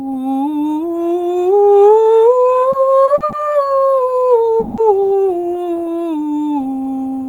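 From 2.71 to 3.35 s, packets arriving late kept draining the jitter buffer, causing repeated stalls (stutter): four short gaps, the longest 50 ms, are filled by stretched music, so it drags and hiccups.

At 4.60 to 4.80 s comes a call audio freeze, likely from packets held up in transit. About 180 ms of continued sound fills the pause before the music resumes without loss.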